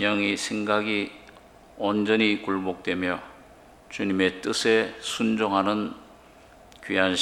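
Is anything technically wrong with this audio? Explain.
No, nothing stood out as technically wrong on listening.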